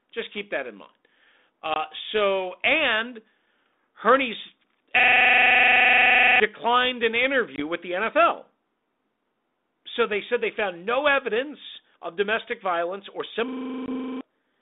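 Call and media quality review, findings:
Packet loss on the ADPCM call at 1.74 s, 7.56 s and 13.86 s. Hard-edged 20 ms silent gaps, likely a single dropped packet each. Decoder predictor and step size desynced from the sender. Speech resumes slightly distorted, settling within tens of milliseconds.

System hang loop at 4.99–6.40 s and 13.48–14.21 s. One 42.67 ms slice repeats exactly, 33 times then 17 times, giving a 23.4 Hz machine-gun stutter. This fits a 2048-sample ring buffer replayed while the host or driver stalled. About 1.5 s and 0.7 s of audio are lost.

Link: G.726 ADPCM, consistent with 32 kbit/s, passing 250 Hz to 3.7 kHz, with light coding damage.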